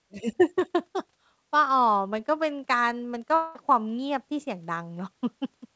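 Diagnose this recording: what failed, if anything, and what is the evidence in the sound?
At 3.35 s the speech is replaced for about 0.2 s, until 3.56 s, by a smeared continuation of the preceding sound that fades out without dropping to silence before the signal resumes with a piece of the sound missing. The stage is the network, with a long network dropout the likely cause, and the receiver's concealment covering the gap. On a waveform the envelope decays smoothly where speech should continue. On a spectrogram the G.722 band, empty above 8 kHz, shows blurred, repeating bands that fade.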